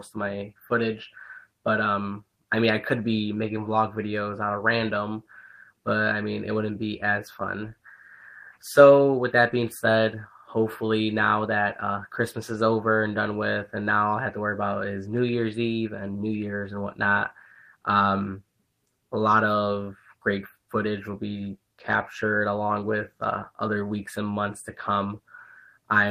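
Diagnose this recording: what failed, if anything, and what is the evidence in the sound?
Nothing failed in this recording, and the sound shows no evidence of a fault at any stage.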